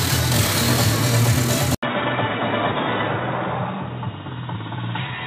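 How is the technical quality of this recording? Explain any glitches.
The recording has one clear fault. Quality drops partway through and stays down.

At 1.75 s, after a silence of 80 ms, the sound turns dull and boxy until the end. Nothing is heard above 3.8 kHz. The level falls by roughly 5 dB. A new background noise appears, around 30 dB below the signal. This is likely an input switched to a poorer device, such as a headset call profile. That device passes a narrower band and brings its own noise.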